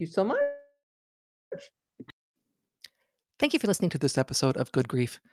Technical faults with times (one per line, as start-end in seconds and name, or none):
0.41-1.54 call audio freeze